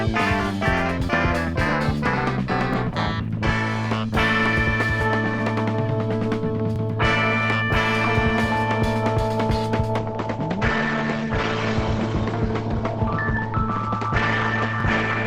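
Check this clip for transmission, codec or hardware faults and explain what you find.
Two faults are present: recurring overlapping chunks and a late drop to a lower-bitrate adaptive stream.

Overlapping chunks occur at 2.74–2.76, 6.76–6.78, 10.78–10.81 and 14.81–14.83 s, once every 4 s. Each new chunk begins before the previous one ends, so about 23 ms of audio plays twice at the join. This is heard as a brief click or stutter. On the waveform, each join shows a short duplicated segment with a discontinuity at its edges.

The adaptive stream switches to a lower bitrate at 9.98 s and stays there until the end. The treble disappears abruptly, with nothing above 8.7 kHz, and codec artefacts increase without any gap. This fits an Opus stream falling from roughly 64 to 16 kbit/s. On a spectrogram, the upper band ends at a hard horizontal edge.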